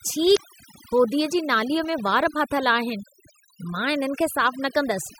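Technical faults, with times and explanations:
Throughout, overdone noise removal: the pauses drop to near silence scattered with twinkling specks. A noise reducer set too strong shut off individual frequency bands close to its noise estimate, cutting away the quieter parts of the voice with them.
0.33 to 0.38 s, damaged data in a compressed stream: a brief glitch just before "होधीअ जी नालीअ में". Corrupted bytes in the compressed stream made the decoder misread those frames and lose sync until it found the next valid frame header.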